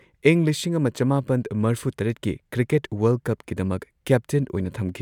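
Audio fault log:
No faults detected anywhere in the speech recording.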